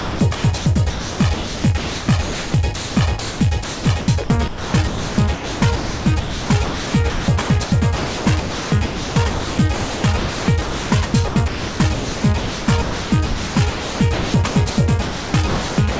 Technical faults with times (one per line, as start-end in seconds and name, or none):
0.00-15.99 sound chopped by the voice detector